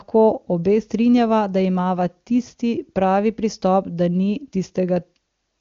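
Nothing stood out on listening to this speech; it comes across as wideband HD Voice audio, with the top of the band ending at about 7.3 kHz.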